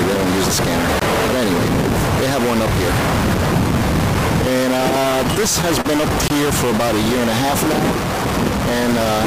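A distortion runs through the whole clip, and the pauses are filled with noise instead of falling quiet. That points to a likely stuck bit. Unlike clipping, the grit does not follow loudness. It tracks the waveform's bit pattern.

From 1.00 to 1.02 s comes a block of digital silence. For 20 ms the signal drops to silence with no fade, long enough to be heard as a short hole rather than a tick. Nothing fills the hole, which separates it from concealment.

Between 4.77 and 5.87 s the audio drags and catches in repeated stalls (stutter). Six times the stream ran dry and the last sound was stretched to cover the wait. Together these fills last 93 ms, the longest 37 ms, and nothing is actually lost. Unlike the silent blocks, these stalls are filled with continued sound.

A second block of digital silence hits from 6.28 to 6.30 s. This 20 ms hard cut to silence is heard as the same short hole. 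Its length and clean, unfaded boundaries match the earlier dropout.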